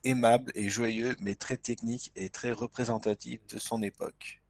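Speech with a call bitrate drop from 0.82 s, just after "aimable et", lasting to the end: the encoder falls from 32 to 10 kbps, so the band narrows from 20 kHz to 8 kHz and the sound turns muffled and rough for about 1.8 s at its lowest, without the gaps of packet loss.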